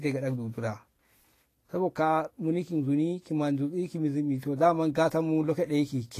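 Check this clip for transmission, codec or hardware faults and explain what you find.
There is one codec fault, present throughout the speech. The treble sounds hissy and grainy, consonant attacks are smeared, and nothing is heard above 14.2 kHz. This is likely Vorbis compression at a low setting, consistent with roughly 33 kbps, where coarsely quantised high-frequency detail turns into noise.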